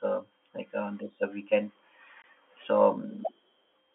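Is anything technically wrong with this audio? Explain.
Yes. Just after "on this uh weekend", from 2.22 to 2.24 s, the speech drops out in a brief 20 ms hole with abrupt edges. This is packet loss filled with silence. A block of audio never reached the receiver, and it played digital silence in its place. The gap's length points to a single lost packet. The band-limited G.711 telephone sound carries on either side of the gap.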